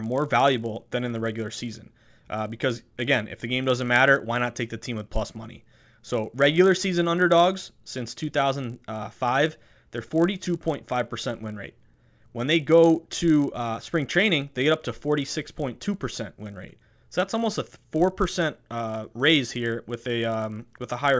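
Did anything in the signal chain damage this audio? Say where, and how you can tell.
Yes: a resampler restarted on every block in the 48 to 16 kHz conversion ticks at each 20 ms block edge, buzzing at 50 Hz throughout. Unlike hum, it disappears in pauses.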